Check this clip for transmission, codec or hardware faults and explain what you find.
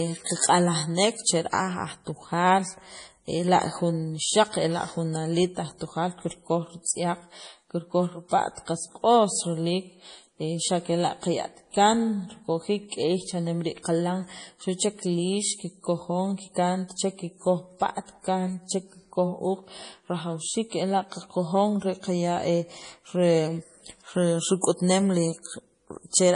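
One codec fault runs through the whole recording: MP3 compression, likely the cause of the heavy damage heard from start to finish. Sibilants turn into metallic, chirping swirls as weak frequency components flicker on and off between frames. That points to an encoder starved of bits, which fits a bitrate around 32 kbps. A plain low-pass filter would dull the top end cleanly. The watery, warbling texture and smeared consonant attacks are what mark this as MP3.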